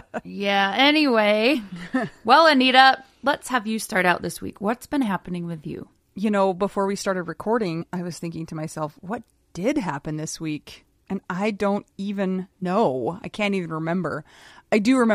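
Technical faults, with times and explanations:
1.53–1.55 s, 7.80–7.82 s (between "know before we started" and "I was thinking to") and 12.61 s (just after "I don't even"): damaged data in a compressed stream. Each is a brief chirp, click or short hole, as the decoder misreads corrupted frames and resyncs on the next header.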